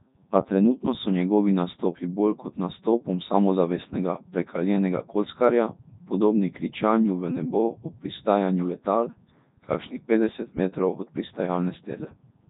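Codec 2 vocoder damage runs through the whole clip. The waveform is never kept: only pitch, voicing, energy and a coarse spectral envelope are sent, and the voice is resynthesised from sine waves, at a rate that fits 3.2 kbit/s. The speech comes out heavily robotic and buzzy, with nothing above 3.8 kHz.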